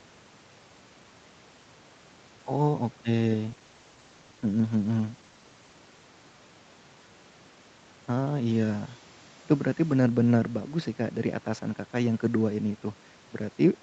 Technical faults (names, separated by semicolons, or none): call bitrate drop